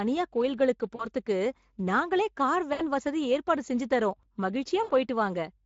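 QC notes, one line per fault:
Throughout: Speex codec, plainly audible; the speech sounds hoarse and noisy, as at around 16.8 kbps the CELP excitation gets too few bits.
0.95–1.05 s, 2.73–2.83 s, 4.83–4.92 s: VoIP packet loss concealed by the speech codec; roughly 40 to 60 ms of audio missing each time, the decoder stretches its last pitch and filter into a sound that fades, heard between "நாங்களே கார்" and "வசதி ஏற்பாடு செஞ்சு தர்றோம்" at 2.73 s.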